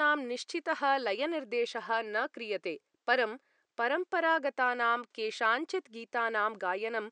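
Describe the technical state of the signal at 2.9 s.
At 2.9 s the speech signal is intact, with only the faint room noise about 53 dB below the speech underneath it.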